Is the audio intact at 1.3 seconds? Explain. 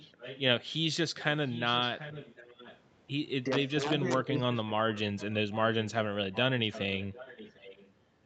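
No. From 1.17 to 2.8 s there's an echo leak, a faint copy of the speech trailing about 0.74 s behind and roughly 15 dB down. The likely cause is a speakerphone on the other end whose echo canceller let part of its pickup slip back.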